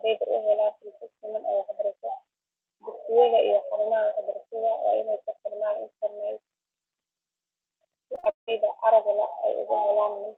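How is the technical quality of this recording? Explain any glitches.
The recording has one stretch of choppy, robotic-sounding speech near the end. Repeated packet loss occurs from 8.15 to 8.49 s, just before "aragga la’". Successive holes, the longest about 0.18 s, were patched by stretching earlier sound, which gives a choppy, broken texture. The speech was carried over a call link whose upper band stops near 8 kHz, which fits an Opus stream at around 40 kbps.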